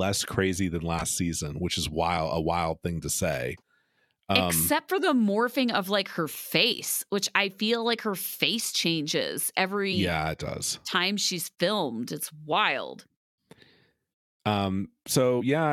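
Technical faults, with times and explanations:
0.98–1.02 s, 6.71–6.73 s, 9.92 s and 15.40 s: damaged data in a compressed stream. Brief glitches after "crazy than", "morphing of like her" and "her face changes every", where corrupted frames derail the decoder until it resyncs. Each appears as a jagged discontinuity in the waveform.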